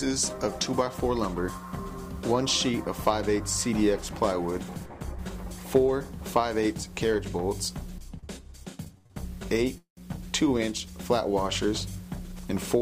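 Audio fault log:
8.19 to 9.11 s, short stall from a late packet: at 8.19, 8.98 and 9.06 s the last sound is held for 32, 74 and 34 ms with a faint buzz or dip while the jitter buffer waits for a late packet. Playback then resumes where it left off, so nothing is lost and the audio only runs later.
9.78 to 9.98 s, call audio freeze: the sound stretches into a fading buzz or hiss and then about 100 ms of silence, 191 ms in all, likely because packets were held up in transit and the jitter buffer ran dry. Playback resumes where it stopped, so a gap is inserted but nothing is lost.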